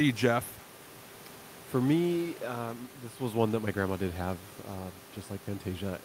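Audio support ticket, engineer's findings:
No faults found in the speech clip. Room noise audible at about 22 dB below the speech, part of the recording environment rather than the system.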